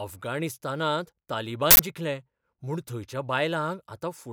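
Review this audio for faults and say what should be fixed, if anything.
An uninitialised buffer reached the output: one block was played before any audio was written into it, so leftover memory became samples. From 1.71 to 1.79 s, about 85 ms, which fits a 4096-sample block, the speech gives way to a loud burst of digital noise. Zero-fill every buffer when it is allocated, and pass a block to the output only after rendered audio has been written into it.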